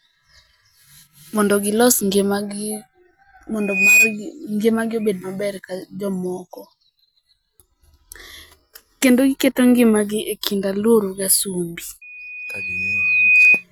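A microphone picking up the loudspeaker it feeds closes a loop whose gain exceeds one at 2.5 kHz, so that frequency reinforces itself. This loudspeaker feedback squeal appears from 3.60 to 4.17 s, swelling within about a third of a second, and again from 12.01 to 13.64 s, climbing more slowly over roughly a second and a half. Each time a single piercing tone rises to around 10 dB above the speech.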